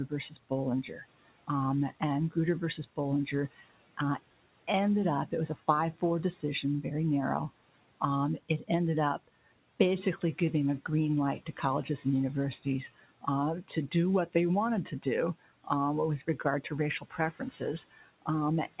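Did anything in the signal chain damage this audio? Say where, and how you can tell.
Yes, in the call processing stage: speech cut by the noise suppressor. From 0.08 to 3.98 s, ending before "uh ended", from 5.27 to 6.02 s, before "decision very narrow", then 12.63–15.67 s and 16.21–18.8 s, short fragments drop by about 11 to 17 dB. The suppressor mistook parts of the speech for room noise. A waveform shows the envelope notching down on those parts, and a spectrogram shows those parts fading toward the noise floor below the G.711 path's 4 kHz ceiling.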